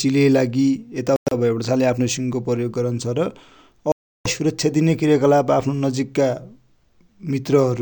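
At 1.16 to 1.34 s and again at 3.92 to 4.27 s, the speech cuts to hard silence, most likely a Bluetooth dropout from late packets. Unlike a pause, the speech resumes further along, as though it had kept playing.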